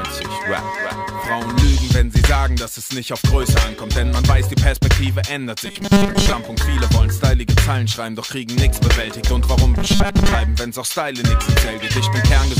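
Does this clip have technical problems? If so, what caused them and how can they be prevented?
Yes. From 5.65 to 6.33 s and from 9.78 to 10.35 s the sound collapses into a rigid, metallic 200 Hz buzz: robotic sound from repeated short buffers. The likely cause is audio arriving too seldom, so a segment of about 5 ms is replayed in place of most of the real signal. A larger input buffer and steadier delivery to the playback stage prevent this.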